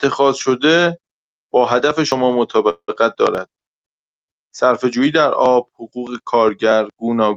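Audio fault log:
2.12 s and 3.35 s, dropped buffer (overrun): at each of these points there's a sudden jump forward in the speech, no gap at all, just a hard splice. That's likely the capture side not reading its samples before the hardware wrote over them, so a slice of roughly 20 ms went missing each time and the audio on either side got butted straight together.
2.69–2.90 s, call audio freeze: the sound stalls here, with the last bit of speech stretched out as a fading buzz for about 190 ms, including around 70 ms that goes fully silent, and then it picks up right where it left off. Nothing is actually lost; the playback just got pushed about 190 ms later. That pattern likely comes from late-arriving packets draining the jitter buffer, with the receiver filling the wait until they turned up.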